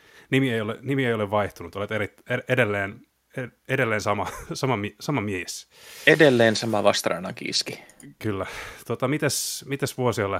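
No technical faults can be heard anywhere in this speech recording. There is no event in it that needs a time or a cause to explain.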